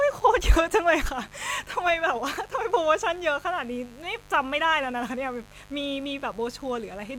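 Mains buzz runs throughout the speech. Switching spikes twice per 50 Hz cycle spray harmonics into the kilohertz range, giving a steady, raspy buzz about 25 dB down.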